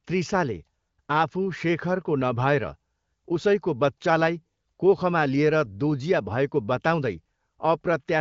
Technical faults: none

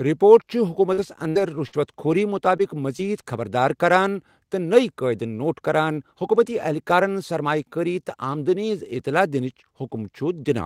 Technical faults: repeated packet loss (robotic sound)

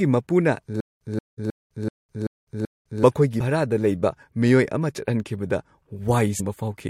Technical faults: stutter with silent gaps

